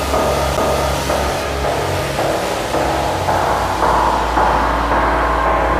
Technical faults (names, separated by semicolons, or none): CD skip